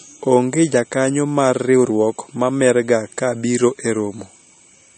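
Throughout the speech, the treble stops abruptly at about 8.4 kHz and weak detail flickers in and out, giving a watery, swirly texture with smeared attacks. This is likely MP3 compression at a low bitrate, consistent with around 32 kbps. Unlike a simple low-pass filter, it adds plainly audible swirling artefacts.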